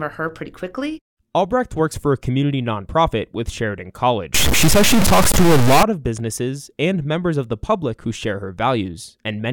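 From 4.34 to 5.83 s, just before "of businesses and members", the speech turns harsh and buzzy, most likely from a stuck bit: one data bit in the converter or its line held at a fixed value. About half the samples are thrown off by that bit's weight, a fairly high one at roughly -10 dBFS, so the distortion follows the waveform, and even the quiet gaps within this stretch fill with loud, gritty noise.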